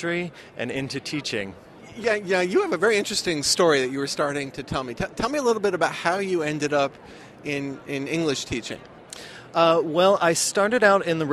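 No technical fault can be heard anywhere in the signal, which runs without any dropout, distortion or interruption.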